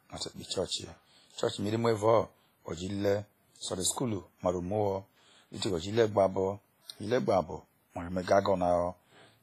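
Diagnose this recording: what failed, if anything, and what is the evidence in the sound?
The failure sits at the codec stage, and the damage is heavy across the whole speech clip. Nothing is left above 15.5 kHz. The sound rings and smears, with a washy hiss that breathes with the signal. This is most likely WMA compression at a low bitrate, which fits about 24 kbps. Its long transform blocks spread quantisation noise over tens of milliseconds, and weak spectral lines are zeroed out.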